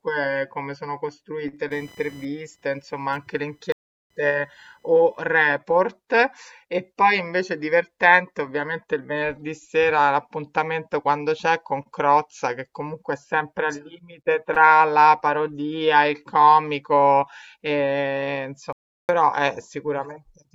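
A speech recording with two kinds of technical fault. From 1.71 to 5.24 s a thin, scratchy buzz sits under the voice, pulsing at around 1 kHz and roughly 35 dB below the speech. It rises and fades independently of what is being said. That pattern marks it as computer activity noise: changing load on the processor, graphics card or mouse disturbs the ground the audio circuit shares, and that electrical chatter leaks into the signal. Twice the speech cuts out mid-flow and resumes after a gap, from 3.72 to 4.10 s (0.38 s) and from 18.73 to 19.09 s (0.36 s). The first gap falls inside the buzzing stretch. These are playback stalls, likely caused by the player running short of buffered data or having its thread blocked, so output went silent until it caught up.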